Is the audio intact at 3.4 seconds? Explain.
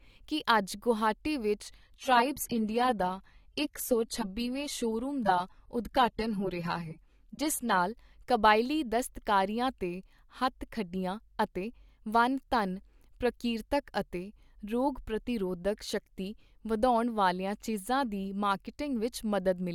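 No, from 1.79 to 7.79 s the adaptive stream is at a lower bitrate, so highs stop near 15.1 kHz and artefacts swell, consistent with roughly 32 kbit/s.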